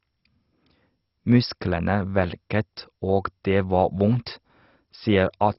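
Throughout, the speech is dull, with nothing above 5.6 kHz, and has a heavy gurgling, granular texture, likely MP2 compression at a very low bitrate such as 32 kbps.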